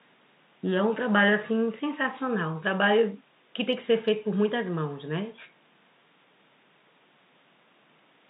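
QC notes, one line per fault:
No technical faults heard.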